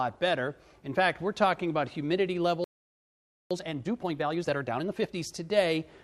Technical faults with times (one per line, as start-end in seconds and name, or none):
2.64-3.51 playback stall
3.51-5.23 time-compressed catch-up